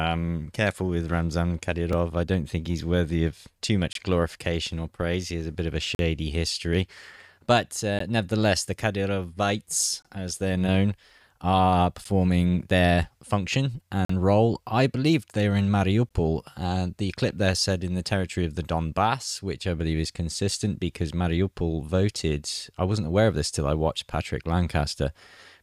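Gaps between stream segments leave hard-edged silent holes at 1.93, 3.93 to 3.95 (after "he's worthy of too"), 5.95 to 5.99, 7.99, 10.02 to 10.05, 12.04, 14.05 to 14.10 and 16.09 s. They recur every 2 seconds and last about 3 to 44 ms. Mismatched segment timestamps open these silences without losing any speech.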